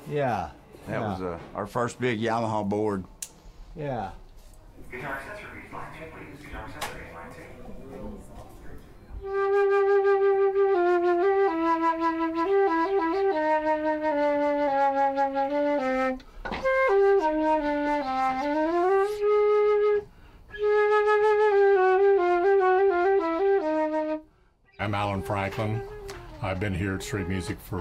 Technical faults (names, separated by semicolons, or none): none